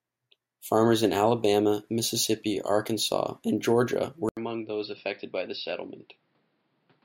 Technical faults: input switched to a poorer device

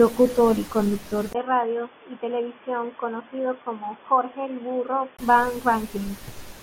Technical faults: input switched to a poorer device

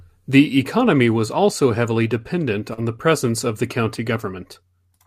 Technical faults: short concealed packet loss

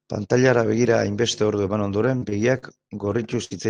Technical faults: repeated packet loss (robotic sound)

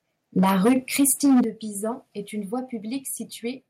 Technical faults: microphone overload; microphone volume stepped down

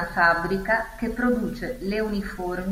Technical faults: none

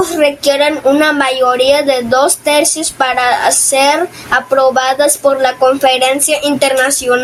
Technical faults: gain pumping

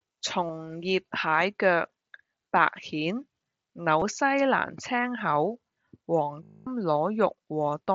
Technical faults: concealed Bluetooth headset packet loss

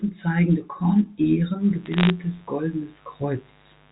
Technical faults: mains buzz; bit errors on a digital phone line

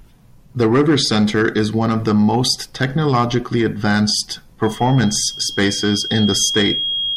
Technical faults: loudspeaker feedback squeal

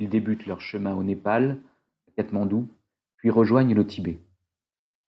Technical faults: automatic gain rising

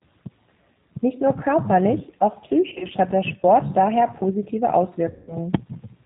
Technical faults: G.729 codec; VoIP packet loss concealed by the speech codec

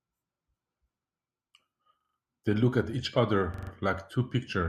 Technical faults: repeated buffer

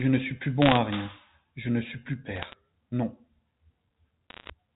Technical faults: bit errors on a digital phone line

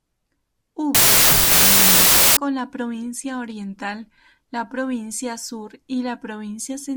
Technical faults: wrong sample width

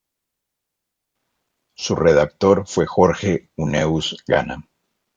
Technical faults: none

